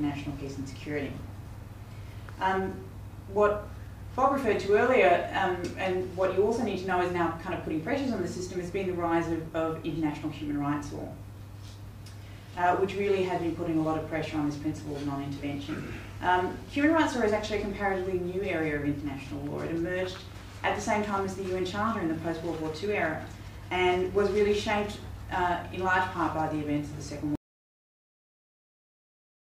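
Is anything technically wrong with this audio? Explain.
Yes. At 27.35 s there is an audio dropout to silence: the sound cuts out mid-flow and stays silent, without room tone, until the end. It was likely caused by lost input from a disconnected device, failed link or stray mute while recording continued. The waveform flattens and the spectrogram goes blank.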